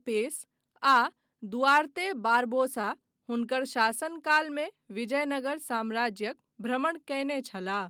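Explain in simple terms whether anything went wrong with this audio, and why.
At about 2.81 to 2.85 seconds, a roughly 20-millisecond piece of the speech was lost: a short concealed packet loss. The receiver patched the gap by stretching the preceding sound, so you hear a tiny smear or wobble rather than the silent hole or sharp click of an ordinary dropout.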